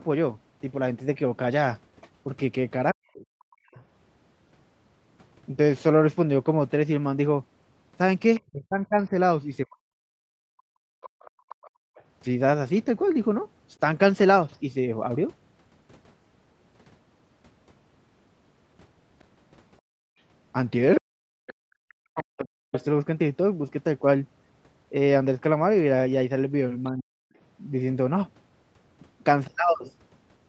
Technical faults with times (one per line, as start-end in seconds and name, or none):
2.92-3.80 speech suppressed in double talk
8.36-14.58 other side's voice leaking through
8.40-10.60 speech suppressed in double talk
10.88-11.95 background gated by the echo canceller
19.81-20.19 background gated by the echo canceller
20.98-22.73 speech suppressed in double talk
21.47-22.83 other side's voice leaking through
26.91-27.35 speech suppressed in double talk